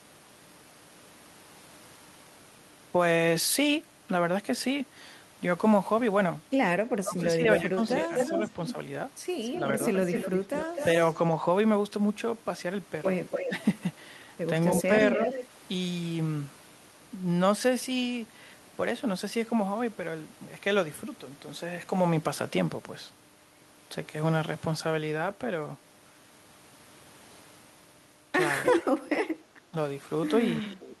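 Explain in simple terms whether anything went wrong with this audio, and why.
Yes, two things went wrong. The echo canceller likely clamped down while both sides talked at once, causing speech suppressed in double talk: the voice dips or drops out at 6.86–8.39 s, 13.48–13.52 s, 14.87–15.19 s and from 29.71 s to the end.

One side's echo canceller likely missed part of the loudspeaker sound, causing echo leak: a copy of the voice comes back about a quarter to a third of a second late, at 7.53–10.85 s, 13.3–13.51 s, 14.77–15.47 s and 28.64–28.85 s.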